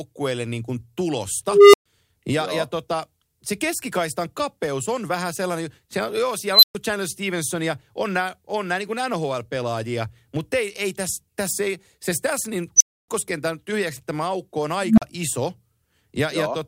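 Speech with four swelling tones that clip and then cut to silence, at 1.48 s (a low tone near 400 Hz), 6.52 s after "sellainen se on joo" (near 4 kHz), 12.76 s after "ei se tässä niin" (near 7 kHz), and 14.82 s after "tyhjäksi tämä aukko on" (near 200 Hz). This is an unstable filter: a recursive filter's output grows in 40 to 260 ms, overflows, and mutes for 40 to 280 ms until it resets.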